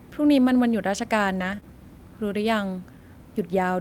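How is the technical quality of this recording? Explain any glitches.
The recording has network glitches clustered in about a third of a second in the middle of the speech.

From 1.35 to 1.53 s the sound turns rougher and noisier without any gap. This is a lost packet rebuilt from error correction. Several separate packets, which fits about five, went missing, and the decoder played the low-bitrate copies carried in the following packets, rebuilding roughly 100 ms.

Right after, from 1.55 to 1.60 s and again from 1.60 to 1.63 s, there is a brief smear or wobble. Each is a short concealed packet loss: about 20 ms never arrived in time. The receiver extended the preceding sound to cover the hole, filling 28 ms and then 12 ms, before blending back into the real signal.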